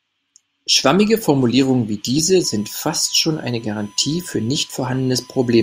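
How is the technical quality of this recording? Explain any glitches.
One fault affects the recording. USB whine, 2.44 s to the end: current drawn in 1 ms USB frames leaks through power or ground, adding a steady 1 kHz tone about 35 dB below the speech.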